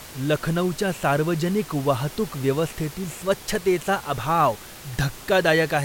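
No technical faults occur at any point in this speech clip, so there is nothing to describe in time order.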